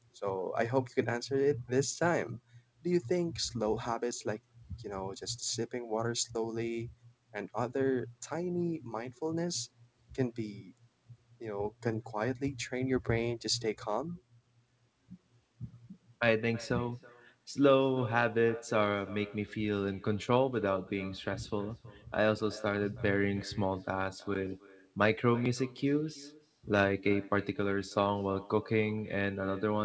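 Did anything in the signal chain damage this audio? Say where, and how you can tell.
Yes. The damage comes from the call path, as echo with no canceller, and it runs through the whole clip. Every phrase is followed by a faint, thin copy of itself, roughly a third of a second later and about 22 dB below the direct sound. The far end played the call on a loudspeaker, and its microphone picked it up again. Nothing cancelled that pickup, so the talker's own sound returned after the network round trip. The top end stops at 8 kHz, which fits a G.722 call codec.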